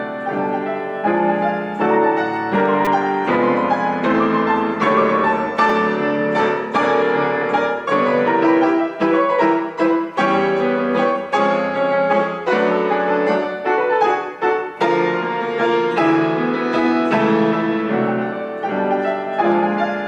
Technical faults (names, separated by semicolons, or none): repeated buffer